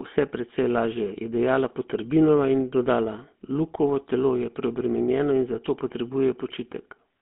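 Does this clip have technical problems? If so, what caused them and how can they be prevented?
Yes. For the whole clip the speech went through the GSM full-rate codec. The encoder reduces the voice to a vocal-tract model driven by a coarse, regularly spaced pulse train, which fits GSM full rate at 13 kbps, and the line keeps only about 200 Hz to 3.4 kHz. The result is plainly audible damage: a buzzy, gravelly roughness throughout, with thin, muffled speech lacking both its lowest body and everything above 3.4 kHz. To prevent it, record locally or use a wideband codec such as AMR-WB or Opus rather than a GSM full-rate link.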